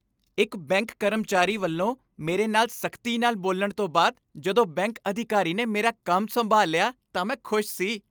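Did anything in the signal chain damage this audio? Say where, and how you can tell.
No, no damage anywhere.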